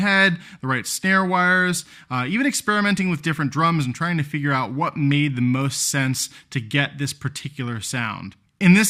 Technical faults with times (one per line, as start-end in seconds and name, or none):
none